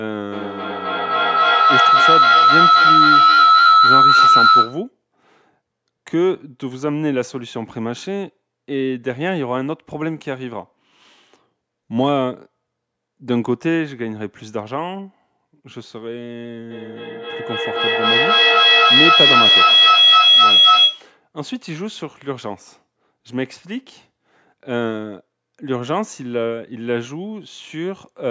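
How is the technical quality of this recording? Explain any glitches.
The speech is marred twice by feedback howl, with the low end trimmed as usual by call microphone processing and nothing above 8 kHz.

From 0.32 to 4.9 s and again from 16.71 to 21.14 s, a loop between two nearby call devices gains level on every pass. It swells into a pulsing tone near 1.5 kHz, then near 3 kHz, repeating about every third of a second and peaking about 10 dB above the speech. Unlike echo, the repeats grow rather than fade.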